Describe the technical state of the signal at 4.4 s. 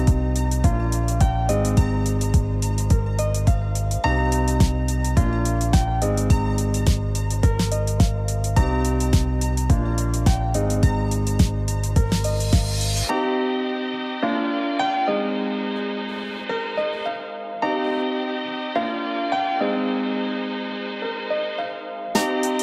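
At 4.4 s the signal is intact, with no dropout, distortion or other technical fault to be heard at that moment.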